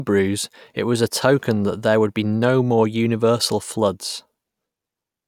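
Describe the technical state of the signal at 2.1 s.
The speech signal at 2.1 s is intact, with no fault audible at that moment.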